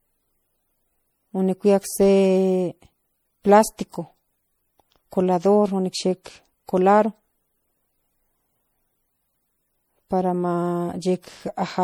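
From start to finish the speech has a swirly, watery character, with a hollow, scooped-out tone and consonant attacks that smear instead of landing crisply. The texture points to generation loss: the audio was likely decoded and re-encoded around five times, each pass quantising on a fresh frame grid so the damage piles up. The smearing fits a 64 kbit/s MP3 chain, even though content still reaches about 21.4 kHz.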